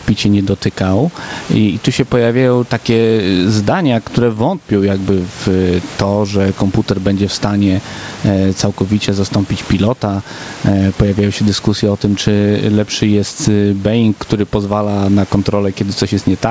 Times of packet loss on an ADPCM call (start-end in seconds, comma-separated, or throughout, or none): none